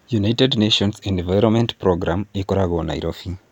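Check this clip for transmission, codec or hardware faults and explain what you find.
Nothing turned up here: the speech comes across with no transmission, codec or hardware trouble to point to.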